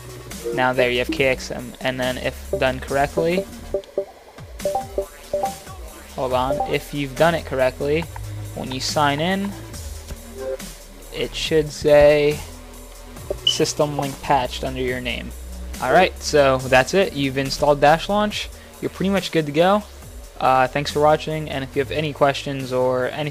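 No technical faults are audible anywhere in the clip.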